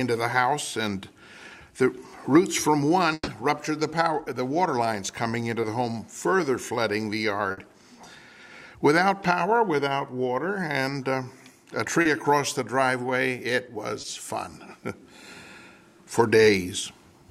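At 3.13 to 3.29 s a burst of packet loss removes a stretch of audio. The receiver extends the last sound for about 140 ms, turning it down as it goes, then about 30 ms of silence follows before playback resumes further on. A shorter burst at 7.51 to 7.59 s gives about 60 ms of fading fill. Short concealed packet loss occurs at 5.61 s (20 ms filled), 12.01 s (40 ms) and 14.01 s (20 ms). In each case the decoder synthesises the missing fragment from the preceding sound and blends back in, heard as a brief smear or wobble.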